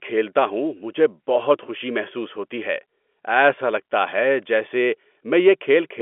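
No faults are audible: the speech sits in a 64 kbps G.711 mu-law telephone channel passing roughly 250 Hz to 3.4 kHz with nothing above 3.7 kHz, as that format should.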